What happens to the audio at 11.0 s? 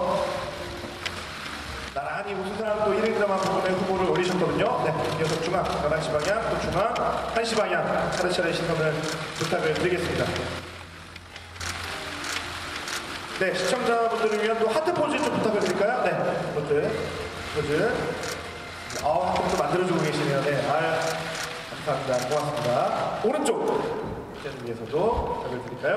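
At 11.0 s the sound drops abruptly by about 6 dB, from 10.59 to 11.60 s. One channel drops out, likely. Otherwise the sound is unchanged.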